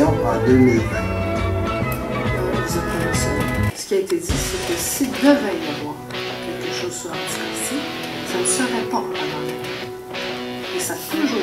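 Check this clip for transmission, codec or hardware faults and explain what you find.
No transmission, codec or hardware faults can be heard anywhere in the clip.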